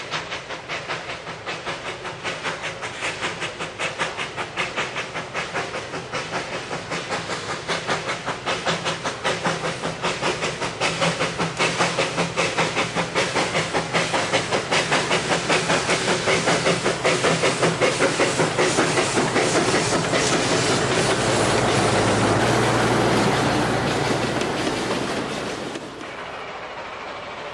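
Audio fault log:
22.4 to 27.54 s, wrong sample rate: from here to the end everything runs 1.09 times fast and sits 1.47 semitones sharp. Speed and pitch rise together because playback is outrunning the original capture rate, which fits 22 kHz material being clocked out at 24 kHz.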